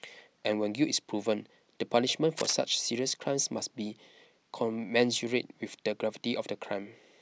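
From 2.37 to 2.53 s a cable scratch noise rasps across the speech, a dense, uneven rustle only a few decibels below it, likely from a worn cable or connector being moved. A spectrogram shows a ragged broadband smear, and the waveform shows jagged spikes.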